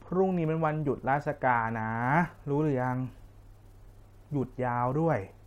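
Nothing technically wrong can be heard in this speech recording, with no dropouts, clicks, distortion, or timing or level problems anywhere in it.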